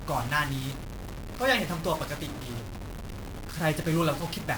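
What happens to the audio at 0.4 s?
At 0.4 s the speech is grainy and harsh, as it is across the whole clip, because of low bit depth without dither. The sound likely went through truncation to about 5 bits, so each sample snaps to a coarse step and the rounding error rides only a little below the speech, roughly 10 dB down. Unlike a steady hiss from dithering, this grit follows the speech: it swells with loud syllables, and quiet tails sputter or cut to silence.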